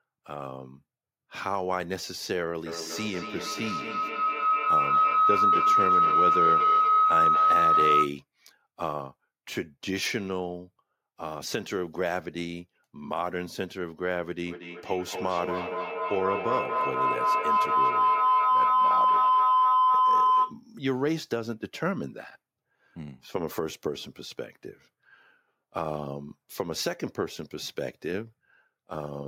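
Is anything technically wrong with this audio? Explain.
Yes. From 2.66 to 8.20 s and again from 14.47 to 20.61 s, a tone near 1.5 kHz, then near 1 kHz, swells over the speech, pulsing about every fifth of a second and peaking around 8 and 7 dB louder. This is feedback howl: a microphone-to-loudspeaker loop gaining on each pass.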